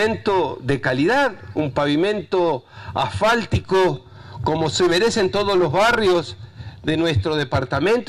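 No technical faults can be heard anywhere in the recording.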